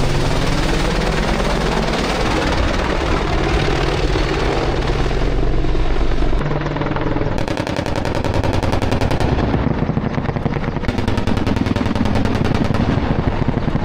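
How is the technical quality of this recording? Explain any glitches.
The recording has one fault, present from start to finish: imaging from linear upsampling. The top end sounds dull, and a faint metallic shimmer clings to bright, hissy sounds. The audio appears to have been raised from 24 kHz to 48 kHz by drawing straight lines between samples, a weak filter that rolls off the upper band and leaves a mirrored copy of the spectrum between 12 kHz and 24 kHz, roughly 35 dB below the signal.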